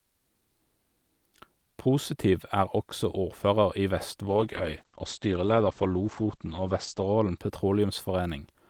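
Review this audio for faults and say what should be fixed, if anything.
A call bitrate drop runs from 4.27 s to 7.43 s. The speech turns rough and watery, and the top end disappears. The audio bandwidth narrows from about 20 kHz to 8 kHz. The coarseness fits an encoder pushed from roughly 48 kbps down to about 11 kbps. The worst stretch lasts about 2.8 s before quality recovers. The cause is a fallen bandwidth estimate starving the encoder. To prevent it, improve network headroom and set a sensible minimum bitrate.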